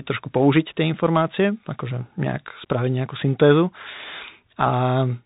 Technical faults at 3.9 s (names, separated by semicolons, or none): Bluetooth CVSD headset codec